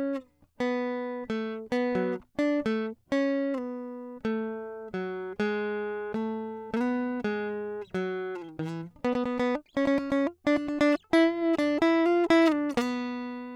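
Nothing in this music recording points to a technical problem anywhere in the signal path.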